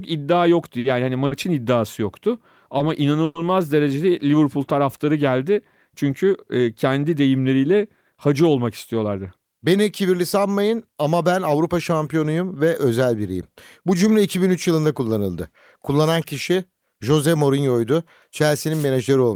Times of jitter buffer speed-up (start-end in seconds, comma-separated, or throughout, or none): 9.04-9.74